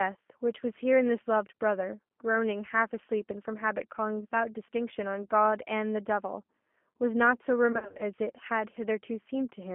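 Throughout, the speech carries G.729 codec damage: a 200 to 3400 Hz telephone band with a rough, synthetic texture from rebuilt excitation, unlike plain band-limiting, which stays smooth.

From 7.72 to 8.04 s comes VoIP packet loss concealed by the speech codec: gaps totalling 160 ms, scattered over 280 ms with no run longer than 40 ms, are filled with fading extrapolated sound, a buzzy tone or coloured noise, rather than silence or clicks.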